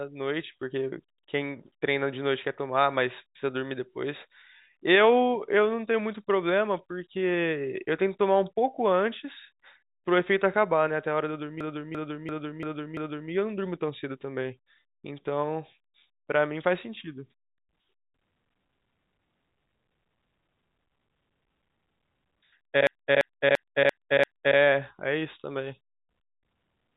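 At 11.61 to 13.31 s and again at 22.87 to 24.58 s, a system hang loop replays one 341 ms slice five times, a machine-gun stutter near 2.9 Hz, which fits a 16384-sample buffer. Unlike packet-loss concealment, each repeat is identical and nothing fades.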